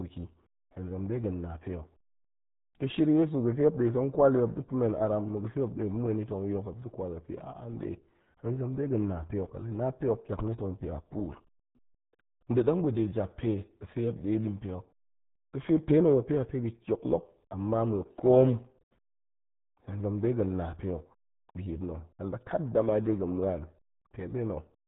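From start to finish the speech is carried through the RealAudio 14.4 codec, and it's squeezed hard. Nothing gets past about 3.8 kHz, so it's muffled and gargly, with the heavy smearing you'd expect from an 8 kbit/s dial-up-era speech coder.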